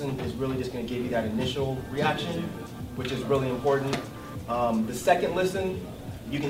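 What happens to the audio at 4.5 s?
Nothing goes wrong at 4.5 s; the audio plays through that moment intact, with no dropout, click, glitch or other audible fault.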